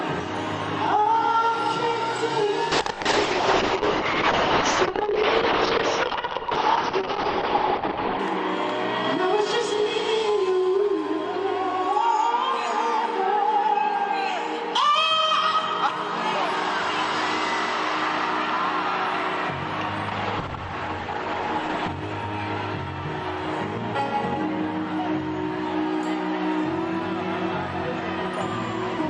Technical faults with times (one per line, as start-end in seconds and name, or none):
2.72-8.25 call bitrate drop
20.09-21.95 call bitrate drop